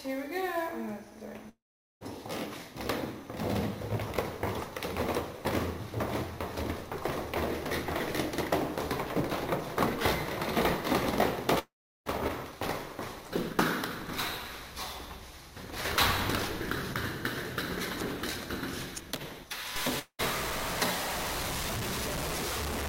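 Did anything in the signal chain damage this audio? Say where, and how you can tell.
Yes. Three gaps point to a long network dropout: 1.49 to 2.03 s (about 0.52 s lost), 11.59 to 12.08 s (about 0.48 s) and 19.99 to 20.21 s (about 0.2 s). Each begins with the last sound smeared into a brief fading buzz, then true silence, and the sound resumes further along with the missing part skipped. That concealment tail and the forward jump separate it from an edit or a mute. The likely cause is packets lost in transit.

From 19.76 s to the end, the sound turns coarse and grainy. The grit tracks the signal, and quiet passages sputter or collapse to nothing. This is low bit depth without dither at the sample-format conversion stage. The error is about as loud as the sound itself, which fits truncation to roughly 4 bits. Unlike a codec artefact or added hiss, the distortion comes and goes with the sound, the likely result of truncating without dither.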